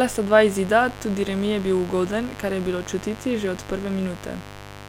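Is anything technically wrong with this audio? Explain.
Yes. A steady, raspy mains buzz runs under the speech for the whole clip, at roughly 15 dB below it: sharp switching spikes from 50 Hz power leak in, adding harmonics into the kilohertz range.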